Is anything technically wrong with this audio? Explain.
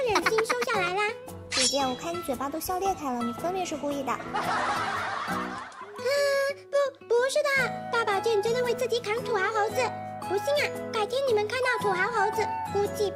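No, the signal holds steady and intact throughout, with nothing in it that points to a technical problem.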